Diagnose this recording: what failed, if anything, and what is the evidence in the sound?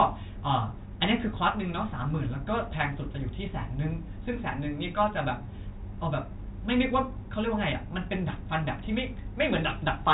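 Nothing failed: the speech carries the expected narrow band of G.711 telephone coding, with nothing above 3.8 kHz, which is the ordinary signature of that path rather than a defect.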